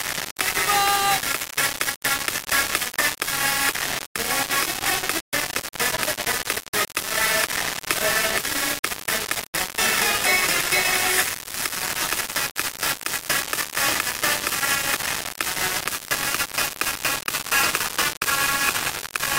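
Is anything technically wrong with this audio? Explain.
Yes. From start to finish the audio suffers from low bit depth without dither. The sound was likely reduced to about 3 bits by plain rounding, with no dither added. That leaves only a handful of amplitude steps. The rounding error tracks the waveform, so it becomes distortion rather than steady hiss. Here the error is roughly as loud as the sound itself. The result is a harsh, grainy texture that shifts with the sound. Quiet passages sputter between steps or drop out.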